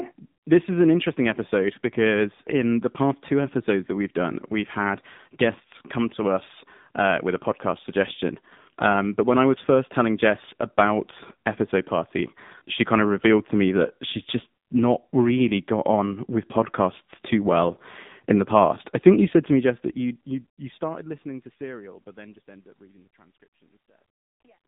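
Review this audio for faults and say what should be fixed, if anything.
Buzzy, synthetic-sounding speech throughout, with nothing above 3.8 kHz: AMR narrowband mobile codec damage, a pulse-driven vocal-tract model starved of bits, consistent with about 7.4 kbps. To prevent it, record locally or route the call over a wideband path instead of a narrowband mobile link.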